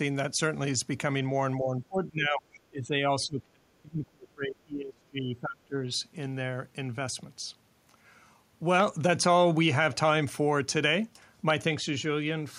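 Speech suppressed in double talk hits this speech clip from 1.58 to 3.05 s and again from 3.25 to 5.8 s, the voice sinking by roughly 20 dB and then nearly 30 dB. Both ends were likely talking at once, so the echo canceller muted the wanted voice along with the echo. A loud pop lands at 8.80 to 8.82 s, about 15 dB above the speech, and another at 11.50 to 11.52 s, about 10 dB above. Each is a single sharp click over continuing speech, likely a voltage spike from a plug, switch or driver glitch.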